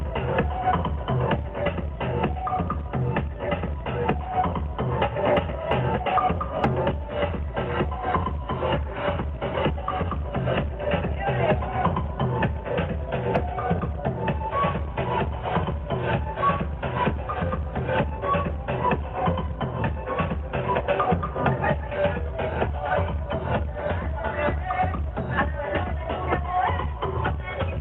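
No technical faults can be heard anywhere in the audio.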